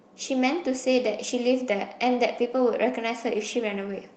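At 1.11–1.29 s and 2.35–2.41 s, lost packets were rebuilt from error correction: the decoder played low-bitrate copies, so the speech stays continuous but turns briefly rougher and noisier.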